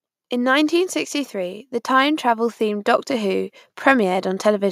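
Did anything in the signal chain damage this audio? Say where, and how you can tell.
Yes. Call processing: automatic gain rising from 0.29 to 4.67 s, speech and background swelling together by about 7 dB as the AGC slowly raised gain on a quiet input.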